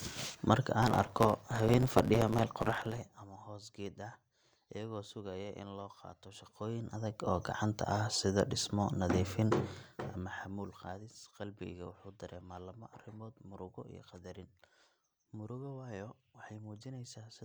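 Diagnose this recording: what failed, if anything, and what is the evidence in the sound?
Between 0.82 and 3.02 s the speech takes on a 100 Hz buzz and runs 1.09 times fast at roughly normal pitch. This is a block size mismatch (truncated) at the driver or buffer stage: blocks arrive longer than the next stage reads, so each block's tail is dropped 100 times a second.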